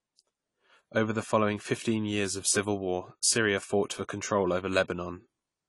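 Throughout the speech, nothing sounds above about 11.4 kHz, and the top end is dull and smeared, with a warbling, fizzy texture on sibilants. This is likely AAC compression at a low bitrate, around 32 kbps, where the encoder lowers its cut-off and starves upper bands of detail.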